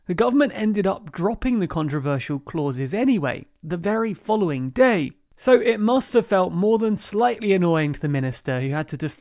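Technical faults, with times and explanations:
No technical faults are present in this speech clip.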